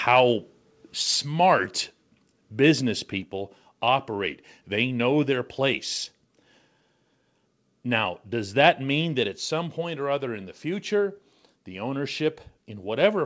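From 0.07 to 0.2 s the opening peaks are flattened, giving a harsh, crackly edge. This is microphone overload, likely from input gain set about 3 dB too hot, so a small fraction of samples hit the converter's ceiling and their tops were sheared off.

At 1.02 s and again at 3.21 s the speech and background drop together by about 3 dB in a single step. This is the microphone volume stepped down, likely by the call software's gain control reacting to the earlier clipping and cutting device input in one step, audible over the call path's band limit at 8 kHz.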